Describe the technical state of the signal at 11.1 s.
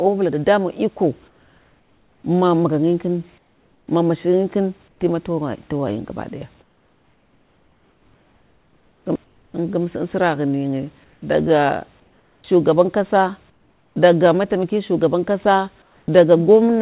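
From 11.04 to 11.22 s the room background turns into steady, featureless noise about 2 dB quieter. This is likely comfort noise in place of the background: the sender paused transmission and the receiver filled the gap with synthetic noise. Unlike a dropout, the gap is never silent.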